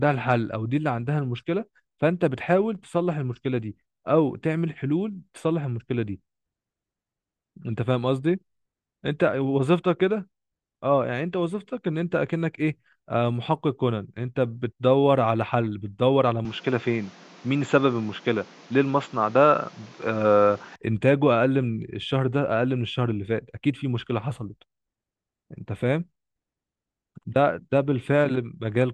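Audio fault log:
16.45–20.76 s, input switched to a poorer device: a narrower input likely took over, cutting sound above 7.6 kHz, shifting level about 5 dB and adding faint new noise.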